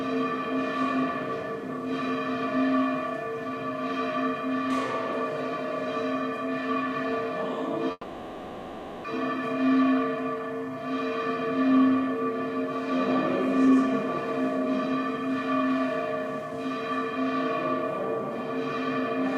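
At 7.91 s the sound stalls into a fading buzz that runs to 9.06 s, a call audio freeze. Packets were likely held up, emptying the jitter buffer, so the receiver stretched the last sound for about 1.13 s, ending in roughly 30 ms of silence. Unlike a dropout, nothing is lost: the audio resumes where it stopped, just later.

From 13.65 to 13.83 s a jitter buffer speed-up plays the audio at 177% speed. The buffer held more than intended, so the receiver cut repeated pitch-period-length pieces, roughly 150 ms in all. The pitch stays put, which separates it from a playback-rate change.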